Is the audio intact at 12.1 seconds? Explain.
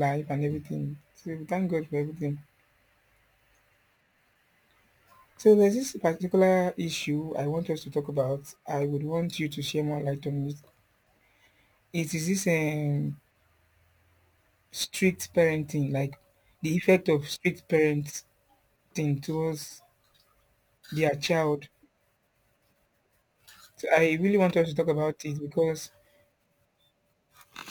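No, at 12.1 s the speech is still carrying the crude rate conversion that runs through the whole clip. Samples were just dropped to the nearest position with no filtering, which fits a 48 kHz to 44.1 kHz change. That leaves a gritty, inharmonic fizz roughly 30 dB under the voice, strongest on loud, bright sounds.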